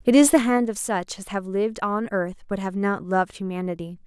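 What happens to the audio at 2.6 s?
At 2.6 s the speech is intact, with no fault to be heard at that moment.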